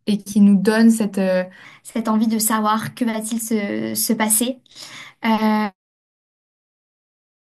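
A short speech recording with a section at the wrong speed. From about 1.65 s right through to the end, everything runs 1.12 times fast, so the voice jumps up around two semitones and sounds a bit high and hurried, with pitch and pace shifting together at that point. That's likely a clock mismatch, where that part was played back or stitched in at a higher rate than it was recorded at.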